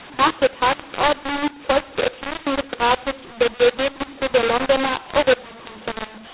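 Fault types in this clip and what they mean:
mu-law and A-law mixed up: The speech is harsh and gritty from start to finish, its quietest moments lifted into a noisy hiss under the 4 kHz telephone band. The audio was coded with A-law but decoded as mu-law, so every sample's level is misread.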